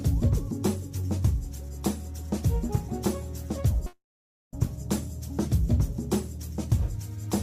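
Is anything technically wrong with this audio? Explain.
Yes. From 3.86 to 4.54 s there is a call audio freeze: the last sound drags on as a fading buzz and then about half a second of silence, likely because late packets emptied the jitter buffer. Unlike a dropout, nothing is lost. The audio resumes where it stopped, about 0.66 s late.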